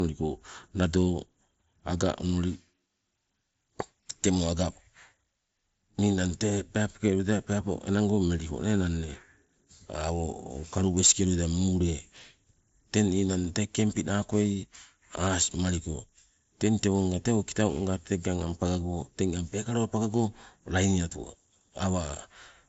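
No technical faults can be heard in this recording.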